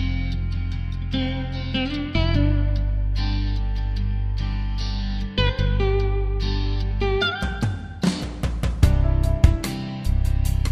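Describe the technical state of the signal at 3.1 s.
Nothing is wrong with the signal at 3.1 s; the audio is intact at that moment.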